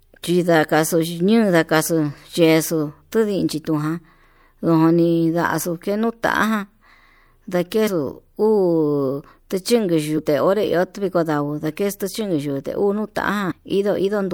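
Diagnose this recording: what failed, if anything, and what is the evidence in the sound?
Compressed frames skipped, at the codec or storage stage. The speech jumps forward at 7.86, 10.17 and 13.50 s, losing about 70, 150 and 100 ms, which fits whole 24 ms frames. A spectrogram shows harmonics shifting abruptly.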